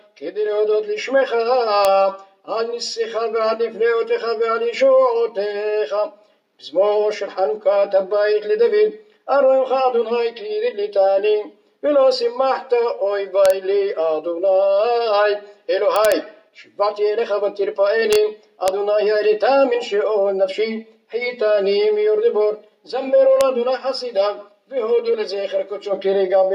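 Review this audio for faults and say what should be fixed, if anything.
Violent, sharp cracks that are far harsher than ordinary clipping land on loud peaks at 1.85 s, 13.46–13.50 s, 15.96–16.12 s, 18.13–18.16 s, 18.68 s and 23.41 s. This is integer overflow. The peaks reach or just exceed the integer limit, by about 1 dB at most, and the samples that pass the integer limit wrap to the opposite sign instead of being held there. Each one snaps across the full range. To prevent it, use saturating arithmetic or a limiter before conversion to integer.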